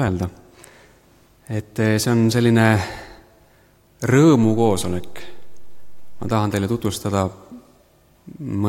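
A DC step occurs at 4.43 s. The waveform's zero line jumps by about -27 dBFS and holds until 6.31 s. Each shift gives a low thump.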